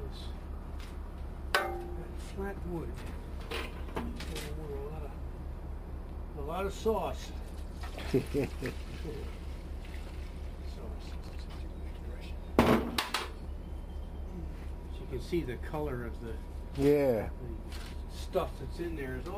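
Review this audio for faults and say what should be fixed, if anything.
Chunks out of order at 3.02–3.11 s and 11.24–11.33 s: a 46 ms chunk (which fits a 2048-sample buffer at 44.1 kHz) was delivered one slot late and swapped places with the next one. Nothing is lost, but each spot sounds briefly jumbled, with three hard joins. Sequence-number each buffer and reorder them in a jitter buffer before playback or writing.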